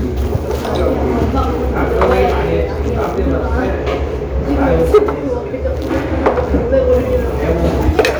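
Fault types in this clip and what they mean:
hard clipping: A stage in the chain was driven about 4 dB past the largest level it can pass, so the peaks were sliced off flat. From 6.26 to 6.93 s those squared-off tops add high harmonics, heard as crackle on the peaks.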